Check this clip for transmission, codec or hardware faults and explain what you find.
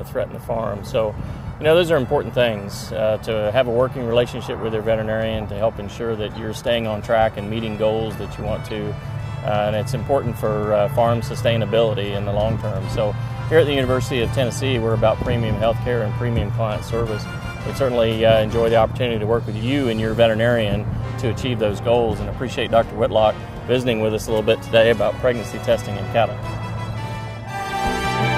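Four short decoding faults stand out.

Corrupt frame decoded at 1.84 s, 6.34 to 6.37 s, 8.65 to 8.70 s and 26.90 to 26.92 s. Damaged bits in compressed frames were played instead of being discarded, so misread gains and codes put energy at the wrong frequencies for the span of the bad data, from a single frame up to a few in a row. Each is heard as a brief chirp or burst of noise, peaking around -25 dBFS at 1.84 s and nearer -30 dBFS elsewhere.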